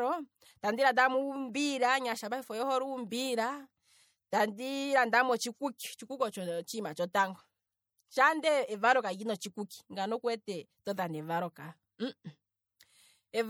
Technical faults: MP3 compression

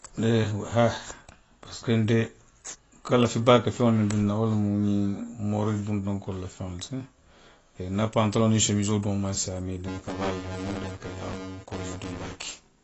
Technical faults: AAC compression; buffer tearing

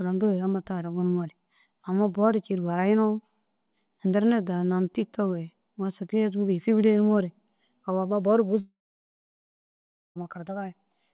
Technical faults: long network dropout

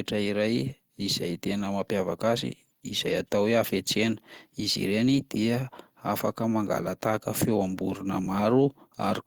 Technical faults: lost packet rebuilt from error correction

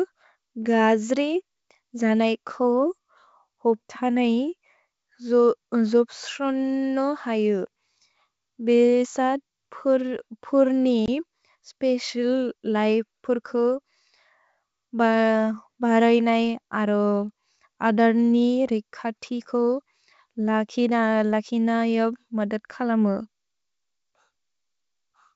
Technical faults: packet loss on an ADPCM call

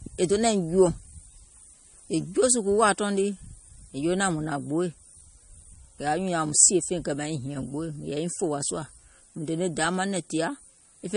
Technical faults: low-bitrate audio saved at a high bitrate

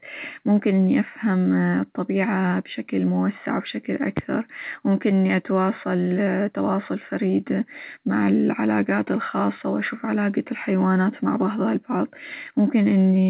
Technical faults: none

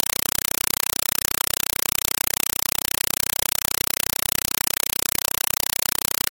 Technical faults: compressed stream played as audio

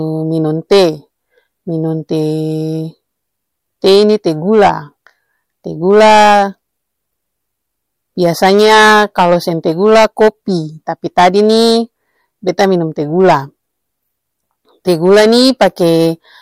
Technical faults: hard clipping

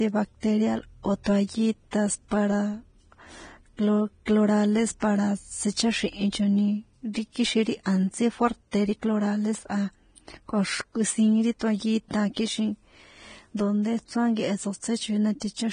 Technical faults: Vorbis compression; pre-echo

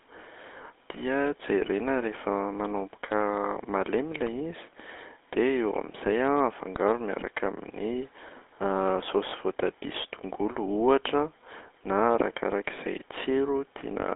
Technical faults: GSM full-rate codec; lost GSM frames

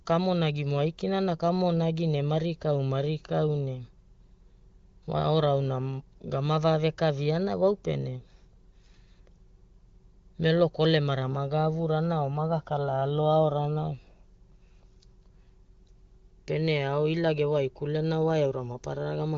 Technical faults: none

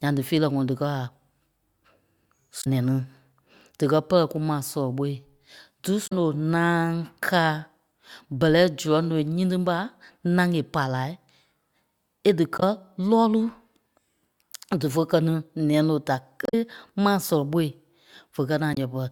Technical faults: damaged data in a compressed stream

